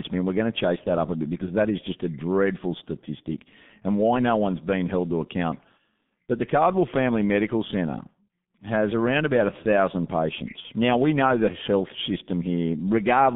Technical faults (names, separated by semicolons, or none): G.723.1 codec; VoIP packet loss concealed by the speech codec